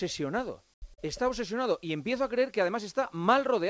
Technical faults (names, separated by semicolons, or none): comfort noise in place of the background; short concealed packet loss